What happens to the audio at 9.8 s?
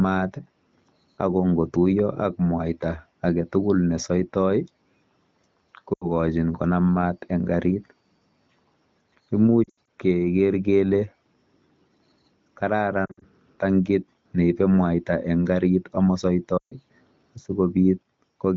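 Around 9.8 s the sound is hit by lost AMR speech frames, spanning 9.64 to 9.87 s. Corrupted frames fail their checksum and the wideband decoder conceals them by repeating the last good pitch and vocal-tract parameters at decaying gain. About 140 ms goes missing in scattered bursts over those 240 ms, which fits roughly seven 20 ms frames. The longest gap, 80 ms, drops to near silence within two frames before recovery brings the sound back briefly rough.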